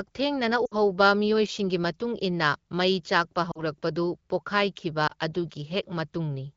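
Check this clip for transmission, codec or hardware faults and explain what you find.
Three short dropouts interrupt the speech, all from lost AMR speech frames. At 0.65 to 0.74 s the voice drops to near silence just before "ꯃꯤꯑꯣꯏꯁꯤꯡꯒꯤ ꯃꯇꯨꯡ ꯏꯟꯅ". At 3.51 to 3.64 s there is a shorter drop to near silence, and at 5.07 to 5.13 s a brief flutter.

The gaps fit runs of about three, two and one 20 ms frames. Radio errors corrupted those frames, so the AMR wideband decoder rebuilt each gap by repeating the last good pitch and vocal tract settings while lowering the gain. The voice returns weak or rough for a moment after each one.

The codec's light, clean character fits AMR-WB at around 12.65 kbit/s.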